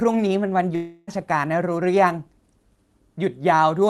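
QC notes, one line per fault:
0.75–1.09 s, long network dropout: the speech stops and, for about 0.32 s, the last sound is stretched into a buzzy, fading hiss with no silence before the audio resumes further on, the intervening stretch simply gone. This is likely a lost run of packets: nothing arrived for roughly a third of a second, and the receiver's concealment filled the entire gap by extending the final sound. The surrounding audio is Opus-coded, with its highs ending near 12 kHz.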